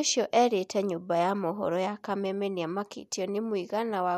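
In this speech clip, at 2.25 s, between "nyũmba ya mohoro ya" and "nĩ amakĩ", the audio lurches forward. Compressed frames were skipped there: roughly one frame, about 30 ms of audio, which fits a frame length near 26 ms.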